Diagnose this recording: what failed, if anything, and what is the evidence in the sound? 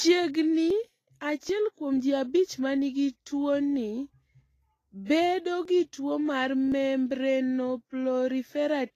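At the codec stage, the signal was most likely squeezed through Vorbis compression at low quality. The speech carries a constant hissy, grainy texture, with nothing above 14.2 kHz and blurred consonant onsets. The encoder kept only a smooth spectral outline of the treble and quantised the detail on top of it so coarsely that it turned into noise of similar energy. The damage is plainly audible and fits a bitrate near 31 kb/s.

At the driver or buffer stage, a likely overrun left the capture software reading too late, so the hardware overwrote buffers before they were collected. This is a dropped buffer (overrun), heard at 0.70, 1.49, 5.65 and 6.72 s as a sudden jump in the speech with no gap of silence. Each time roughly 20 ms of audio vanishes, and the two sides are butted directly together.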